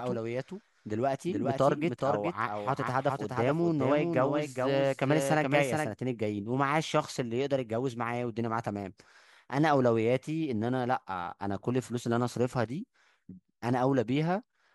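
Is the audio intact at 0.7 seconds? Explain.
No. A doubled audio track runs from 0 to 5.92 s: a second copy, about 5 dB quieter, trails by roughly 400 ms, likely from a slower capture path.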